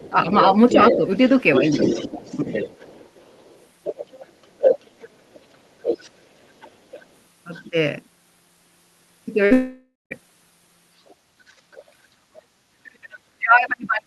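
From 0.05 to 7.69 s a second voice sits under the main talker at roughly 10 dB below it: the other side's voice leaking through, likely because the far end is played on a loudspeaker and the echo canceller leaves part of it in the microphone. Unlike crosstalk on a line, it tracks the conversation itself.

Within and just after that stretch the main talker dips while both sides talk: speech suppressed in double talk, at 0.11 to 1.02 s (a shallow drop of around 5 dB), 1.59 to 2.47 s (around 10 dB), 3.99 to 4.72 s (a deep cut of around 25 dB) and briefly at 7.70 to 7.75 s. The level drops follow the overlap rather than any gap in the signal, which points to the canceller likely turning down both voices because it could not separate them.

At 9.45 to 9.53 s a burst of packet loss leaves 60 ms missing, with 53 ms patched over by a short continuation of the last sound. It runs straight into a long network dropout from 9.53 to 10.13 s, likely caused by no audio arriving. 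Here 580 ms are missing, and the fill fades until about 160 ms of silence remain before the audio resumes further on. The length and the silent tail set it apart from the brief burst.

From 11.08 to 11.82 s the other side's voice leaks through again, now faint at roughly 30 dB down. From 12.52 s to the end, speech suppressed in double talk pushes the talker down by as much as 40 dB, almost removing them.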